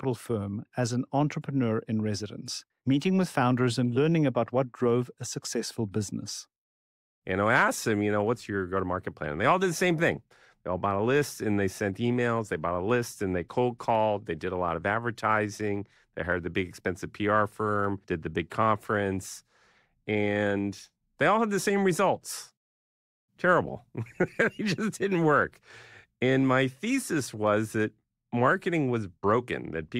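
Two devices are likely running on unsynchronised clocks, a few hundred parts per million apart, so from 0.11 s to the end a single sample slips roughly every twentieth of a second. These clock slip clicks form a faint, soft rattle riding on the speech, loudest on sustained sounds.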